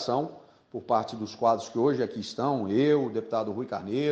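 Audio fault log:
No faults are heard anywhere in this clip. There is nothing to log for any stretch of the audio.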